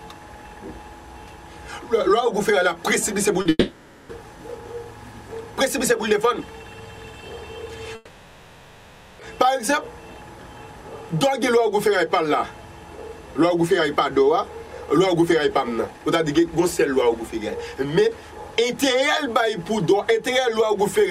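A short concealed packet loss at about 3.41 s leaves a brief smear lasting roughly 40 ms. The receiver bridges it by extending the preceding sound and then blends back into real audio, so nothing goes missing beyond that tiny gap. Immediately after, from 3.49 to 4.11 s, the sound stretches into a fading buzz or hiss and then drops out for about 20 ms before resuming further on. From 7.95 to 9.21 s, a similar drawn-out buzz or hiss lasts about 1.24 s. These two gaps likely come from long network dropouts: far longer concealed stretches that decay rather than blend back, followed by a jump past the lost audio.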